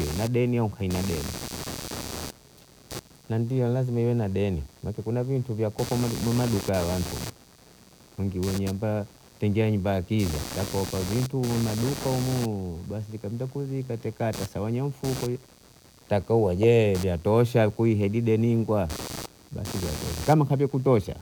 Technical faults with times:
0.00-21.21 computer activity noise

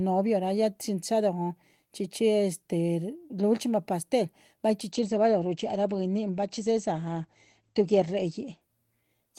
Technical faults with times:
4.92-8.69 call bitrate drop

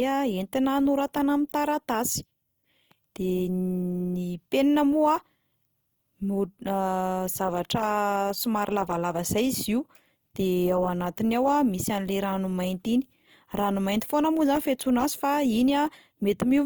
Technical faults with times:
0.00-16.65 Opus compression

